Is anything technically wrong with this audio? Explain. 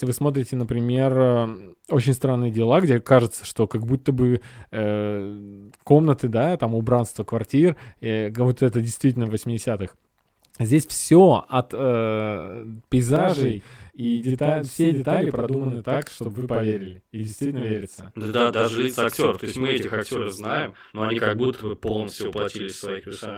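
Yes. From 13.16 s, right after "все от э", to the end, the speech has a channel delay (doubling). One channel arrives about 46 ms late, which fits a 2048-sample buffer, and the two channels are summed to mono. The result is a single slap-back copy at equal level. Room reverb would instead decay as a smear of reflections. The fullband Opus coding at 24 kbps in hybrid mode shows only light codec damage.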